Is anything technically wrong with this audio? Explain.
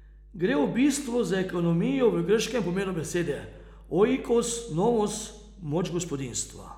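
Yes. Mains hum runs throughout the speech, a steady 50 Hz tone with low harmonics sitting about 25 dB below the voice. A ground loop or nearby transformer has let the power line leak into the signal path, adding a constant low drone beneath every pause.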